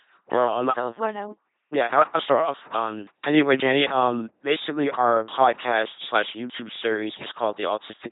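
From start to finish the speech has a buzzing, mechanical robot quality, with no content above about 3.8 kHz. This is the LPC-10 vocoder sound, and the heavy damage fits a 2.4 kbit/s coder. Instead of carrying the waveform, it rebuilds the voice from a short all-pole vocal tract filter excited by either a pulse train or noise. Each moment is forced to be fully voiced or fully unvoiced, so the natural mixture is lost and only a synthetic buzz and hiss remain.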